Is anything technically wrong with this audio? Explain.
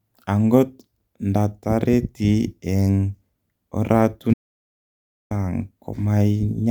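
Yes. An audio dropout to silence runs from 4.34 to 5.31 s. The input was likely lost, so the speech cuts to silence with no room tone, unlike a level dip.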